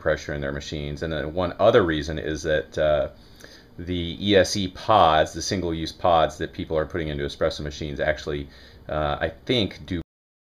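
At about 10.02 s there's a cut-off end: the last buffers never got written or played, so the sound stops mid-event and drops straight to silence with no decay.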